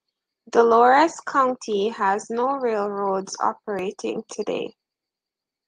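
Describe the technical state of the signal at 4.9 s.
At 4.9 s the speech signal is intact, with no dropout, distortion, glitch or other technical fault audible at that moment.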